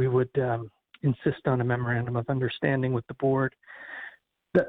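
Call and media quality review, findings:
Call and media quality review found no faults in this clip.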